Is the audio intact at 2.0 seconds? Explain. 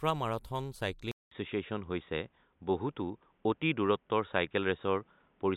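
No. From 1.11 s to the end, an input switched to a poorer device likely explains it: after a 200 ms gap, the speech loses everything above 3.8 kHz, shifts a few decibels in level, and picks up a faint new noise floor.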